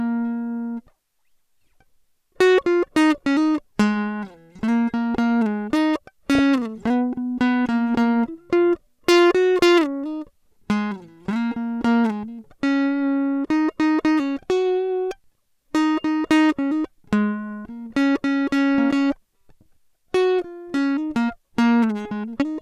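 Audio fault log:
6.35 to 6.39 s, DAB burbling: a short burst of burbling passes over the music, with blips in narrow frequency bands. Weak reception lets bit errors slip through the error correction into the MP2 audio data. Corrupted samples put short blips of noise in single sub-bands, and corrupted scale factors make sub-bands jump in level for up to a frame. That gives the burbling texture. The error rate is low, around one bit in a thousand.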